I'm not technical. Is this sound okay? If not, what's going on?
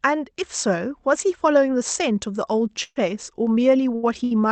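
No. Between 2.83 and 2.97 s there is a call audio freeze, most likely because network packets arrived late and the receiver ran out of audio. It fills about 126 ms by dragging out the last sound as a fading buzz, including about 30 ms of silence, then resumes where it stopped. Nothing is lost, only delayed.

There are also two shorter hiccups, each a short stall from a late packet: 3.95 to 4.04 s (78 ms) and 4.24 to 4.32 s (69 ms). In each, one sound is held slightly too long with a faint buzz before the audio continues, with nothing missing.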